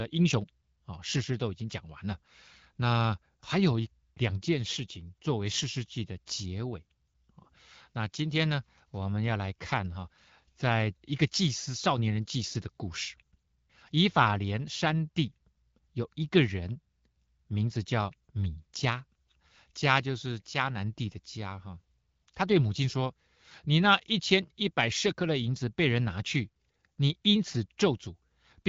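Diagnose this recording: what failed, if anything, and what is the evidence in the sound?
Nothing failed in this recording, and there is no evidence in the sound of any fault.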